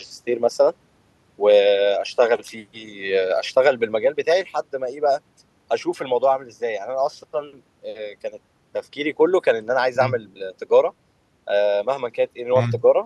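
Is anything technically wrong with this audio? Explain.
No, nothing technically wrong can be heard here.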